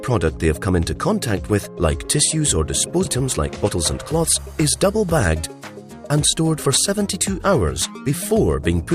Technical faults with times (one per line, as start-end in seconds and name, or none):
3.05-3.07 skip ahead
3.20-5.03 jitter buffer speed-up